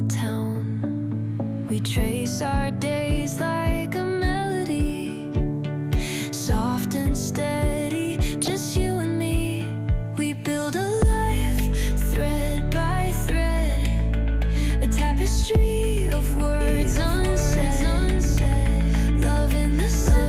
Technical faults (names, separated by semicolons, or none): MP2 compression; DAB burbling; doubled audio track